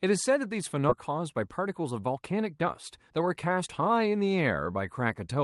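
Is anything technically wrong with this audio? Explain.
Yes. At 0.89 to 0.91 s there is a skip ahead: roughly 0.4 s of already-queued audio was dropped, so playback jumps forward with no gap and the two sides butt together. From 1.11 to 3.27 s there is a jitter buffer speed-up: holding too much audio, the receiver repeatedly cut short pitch-period pieces, about 0.15 s in all. The sound runs about 7% fast at unchanged pitch and feels hurried. The audio passed through a call codec consistent with Opus, with highs ending around 12 kHz.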